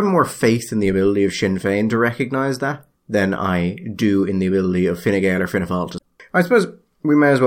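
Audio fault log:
5.94–6.04 s: damaged data in a compressed stream, a brief disturbance in the speech as the decoder misreads corrupted frames, loses sync and skips ahead to the next header.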